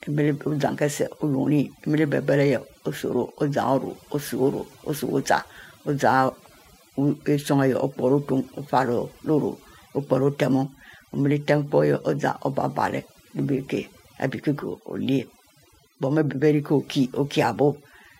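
Across the whole clip the speech carries overdone noise removal. A noise reducer set far too aggressively is switching individual frequency bands down whenever their level sits close to its noise estimate, so the pauses collapse into near silence dotted with brief chirping specks. Softer parts of the voice are stripped with the noise. Unlike a noise gate, which mutes everything at once, the damage here is scattered band by band.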